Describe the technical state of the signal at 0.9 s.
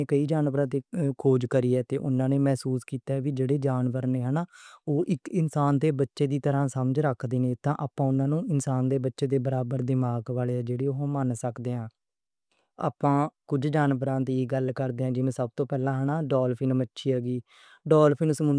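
At 0.9 s the speech signal is intact, with no dropout, distortion, glitch or other technical fault audible at that point.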